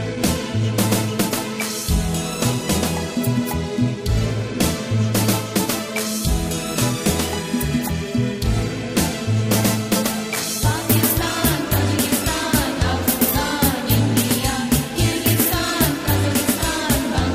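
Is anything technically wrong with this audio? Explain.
Yes, there's hard clipping running right through the clip. The signal is pushed about 6 dB past what the stage can pass, so the loudest peaks get sliced flat. Only a small fraction of samples hit the ceiling, well under one percent, so it isn't a constant fuzz. You hear crackle on the peaks instead, because those squared-off tops throw harmonics high up the spectrum that weren't in the original sound.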